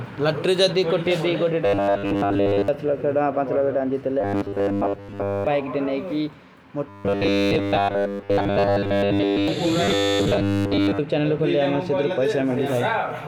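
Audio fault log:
1.65–2.68 s, 4.21–5.47 s, 6.89–9.48 s and 9.84–11.00 s: robotic sound from repeated short buffers. In each stretch the speech turns into a stiff, metallic buzz locked at 100 Hz that still roughly tracks the talking. That fixed pitch fits a 10 ms chunk being replayed over and over while most of the real audio gets dropped, likely because new audio was arriving too slowly to keep the playback fed.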